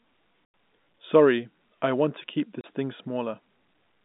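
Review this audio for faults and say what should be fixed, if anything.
Packet loss filled with silence cuts the speech at 0.45 s for 90 ms, and after "I want to keep" at 2.61 s for 30 ms. Both gap lengths fit 30 ms packets, and the gaps have hard edges. Packet loss concealment at the receiver would mask such gaps.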